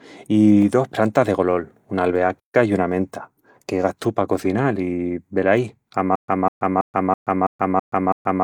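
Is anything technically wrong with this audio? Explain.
Yes, there are two faults. At 2.39 s a playback stall cuts the speech off for about 141 ms, and it resumes at 2.55 s with "i una". The likely cause is the player running out of data or having its thread blocked. The waveform shows a brief flat gap, and the spectrogram shows a clean vertical blank band.

From 6.16 s to the end, the clip turns into a stutter with silent gaps. A 200 ms fragment repeats seven times, each followed by about 128 ms of silence, so it returns every 328 ms. This is likely a stalled stream replaying its last fragment at each retry. The waveform shows identical blocks separated by flat stretches, and the spectrogram shows a repeating striped pattern.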